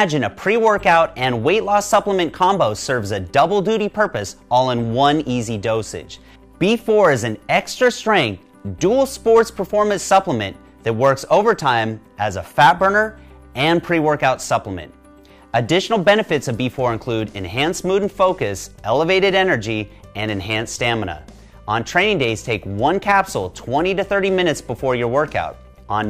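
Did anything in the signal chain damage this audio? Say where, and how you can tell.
No, nothing in the signal chain audibly damaged this audio. No stage from capture through to playback has left a trace that points to it.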